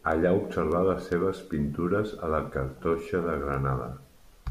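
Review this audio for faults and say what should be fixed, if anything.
Word clock ticks run through the speech from 0.12 s to 4.35 s: about twenty sharp clicks, roughly one every 0.2 s, some louder than others. The receiving device is running on its own clock rather than locking to the sender's. With a mismatch of around 100 ppm, the two clocks slip by one sample about every 0.2 s, so a single sample is dropped or repeated each time. On a spectrogram they appear as thin, evenly spaced vertical broadband lines. In the waveform each is a one-sample step or discontinuity. To prevent this, lock the receiving device to the incoming digital signal or to a shared master word clock so both ends run at the same rate.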